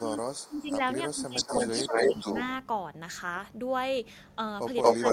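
From 0.0 to 0.83 s the speech dips, dropping by roughly 15 dB at its deepest. This is likely speech suppressed in double talk: with both sides talking, the echo canceller turned the near talker down along with the echo. Within that stretch, at 0.39 to 0.61 s, a faint copy of the speech arrives 324 ms late, about 30 dB below it. This is likely an echo leak, where loudspeaker sound picked up by one side's microphone got past its canceller. Similar dips return at 1.08 to 1.38 s, about 15 dB deep. From 1.36 to 2.44 s a 237 ms delayed repeat sits about 5 dB above the speech. Inside it, at 1.87 to 1.94 s, the speech dips by about 10 dB. From 4.82 s to the end the 237 ms echo returns about 10 dB louder than the speech, and a further 10 dB dip falls at 4.95 to 5.04 s.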